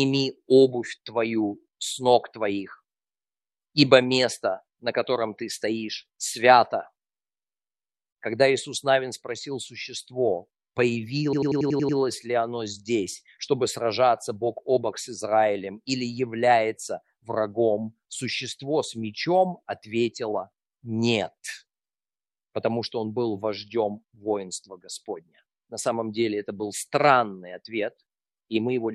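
From 11.33 to 11.98 s, a system hang loop: the system stalled while the hardware replayed one 93 ms block, fitting a 4096-sample buffer, seven times. It stutters like a machine gun at 10.8 Hz. The waveform shows identical repeated segments, and the spectrogram shows evenly spaced vertical stripes.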